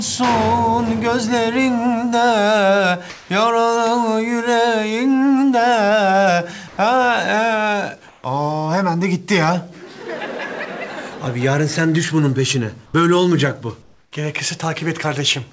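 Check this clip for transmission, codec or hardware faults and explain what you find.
Short gaps in the background are filled with comfort noise at 3.10–3.30 s, 6.68–6.78 s, 8.08–8.24 s, 12.86–12.94 s and 13.82–14.12 s. The likely cause is discontinuous transmission: the sender's voice detector judges these stretches silent and stops sending, so the receiver generates its own noise. For 80 to 300 ms the textured background, roughly 29 to 40 dB below the loudest passages, becomes a flat, uniform hiss. Most swaps land within about 1 dB of the real level, but the last two drop by about 2 and 4 dB. The call path itself is audible as a hard ceiling with nothing above 8 kHz, which fits a wideband call codec such as G.722.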